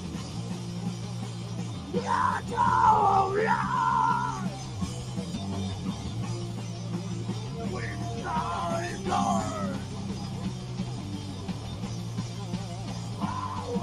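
A speech-style noise suppressor has been left running on this material, and you can hear it working all the way through. It treats the sustained parts, the steady tones, the ambience and the decaying tails, as if they were background noise and pulls them down, while the sharper onsets slip past mostly intact. The level keeps swinging by around 10 dB as it clamps and releases, so the sound pumps and flutters and the held parts thin out.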